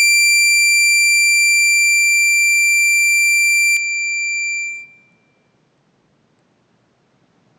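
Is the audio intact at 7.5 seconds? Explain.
No. From 3.77 s to the end, the input likely switched to a poorer device: the music loses everything above 8.2 kHz, drops about 5 dB, and gains faint new noise. A spectrogram shows the top band cut cleanly away, and the waveform shrinks slightly.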